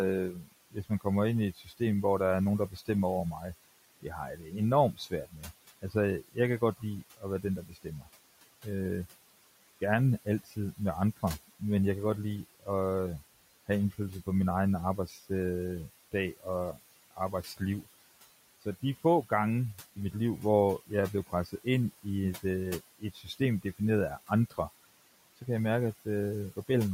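A speech recording with noise suppressor artifacts running its whole length. The suppressor pulls the room noise, which sits about 19 dB below the speech, down by about 16 dB wherever it decides no speech is present, so the background drops away in the pauses and comes back underneath each phrase. On a spectrogram the gaps look unnaturally dark, with scattered isolated speckles of leftover noise flickering frame to frame, while the noise floor visibly rises again behind the speech energy. The same processing also produces speech cut by the noise suppressor, where quiet parts of the talking are mistaken for noise and turned down with it. This happens across 0.32 to 8.65 s, totalling around a second and a half of affected sound with drops of up to about 19 dB. It happens again from 10.25 to 11.61 s, ending just before "jeg kan godt lide", for roughly 200 ms at up to about 16 dB. A third stretch runs from 12.6 to 26.69 s, after "jeg kan godt lide", totalling about a second at up to about 17 dB. 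The affected parts sound swallowed. In the waveform these show as envelope dips, and on the spectrogram as speech energy that is missing where it was turned down.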